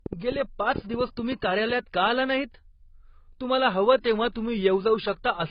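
A train of clicks runs from 0.06 to 1.71 s of this speech recording, ending just before "का आला नाहीत". About ten sharp, similar pulses arrive at an uneven pace of roughly 6.7 per second, standing out around 10 dB above the speech and ticking through the gaps as well. The likely source is electrical interference or a faulty connection or power supply injecting a pulse again and again. Throughout the clip there is low-bitrate audio saved at a high bitrate. Nothing is present above 5 kHz, and the band-limited, smeared character of a starved encoder stays audible. The sound points to a first pass through something like 16 kbit/s AAC, likely followed by re-saving as a roughly 192 kbit/s MP3. That second, generous encoding makes the file larger but cannot bring back the discarded detail.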